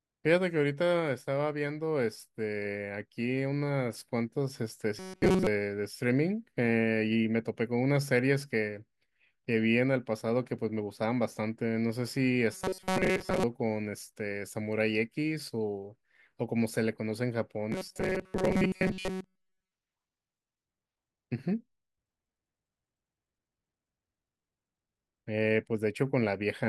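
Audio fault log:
4.99–5.47 s, 12.53–13.43 s and 17.72–19.71 s: robotic sound from repeated short buffers. In each stretch the speech turns into a rigid, metallic buzz locked at 188 Hz. The likely cause is new audio arriving too late, so a fragment of about 5.3 ms is looped in its place and most of the real signal is skipped. That fixed buzz, which still loosely follows the syllables, sets it apart from a pitch shift or a comb-filter colouring.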